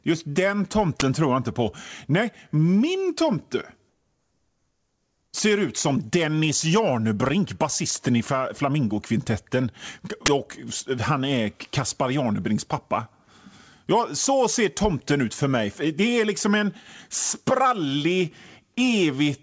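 A short, loud burst of digital noise cuts in from 1.00 to 1.02 s, and the same 20 ms burst returns from 10.26 to 10.28 s. This is an uninitialised buffer: a block was played before any audio was written to it, so stale memory came out as samples.

From 3.89 to 5.33 s the background turns into a steady, featureless hiss about 5 dB quieter than the real ambience around it. This is comfort noise in place of the background, likely from discontinuous transmission, where the receiver fills the pause with synthetic noise.

Throughout, nothing above 8 kHz comes through, which fits a G.722 call codec at 64 kbps.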